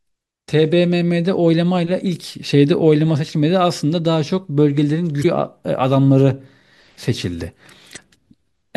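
A short glitch cuts into the speech from 5.20 to 5.25 s, and a second one of the same length follows from 7.93 to 7.99 s. Both come from damaged data in a compressed stream. A stretch of the encoded bytes was corrupted, so the decoder misread or discarded the affected frames, lost sync, and had to hunt for the next valid frame header before normal playback resumed.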